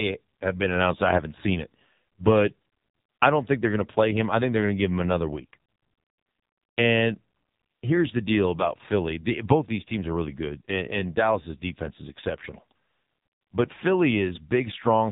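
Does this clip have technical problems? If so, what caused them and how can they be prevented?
Yes. An AMR narrowband mobile codec at a heavy setting, consistent with about 5.9 kbps, removes everything above 4 kHz throughout, leaving the speech muffled, buzzy and synthetic. To prevent it, carry the call over a wideband codec such as AMR-WB or EVS, or record locally instead of through a narrowband mobile link.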